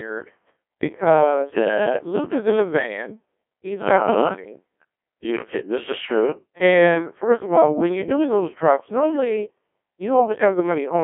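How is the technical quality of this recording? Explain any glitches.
The quality is poor, and it's the same problem from start to finish. The whole speech clip has been through a Codec 2 vocoder, the low-rate codec used on digital radio. It doesn't keep the waveform. It only sends pitch, voicing, energy and a rough spectral envelope, and the decoder rebuilds the voice from sine waves. The damage is heavy here, consistent with something like the 1.2 kbit/s mode, so the voice comes out robotic and buzzy. It's squeezed into a phone-style band of about 250 Hz to 3.4 kHz, with nothing at all above 3.7 kHz.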